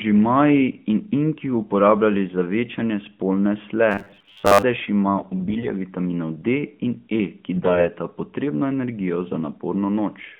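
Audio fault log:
3.92–4.64 s, robotic sound from repeated short buffers: just after "za večanje spolne sle" the speech turns into a rigid metallic buzz pinned at 100 Hz. This is likely caused by audio arriving too seldom, so the player loops a 10 ms stretch through most of this span while the real audio is skipped.
5.08–5.72 s and 7.56–7.88 s, AMR bit errors: the voice keeps roughly its pitch and level but goes hoarse, scratchy and gargly, harsher in the later burst. A few percent of the less protected bits arrive flipped, so the decoder's pulses and fine gain and spectrum values land wrong within the narrowband 150–3400 Hz mobile channel.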